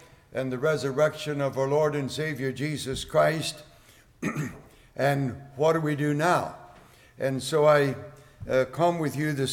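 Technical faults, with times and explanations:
No technical faults can be heard anywhere in the clip.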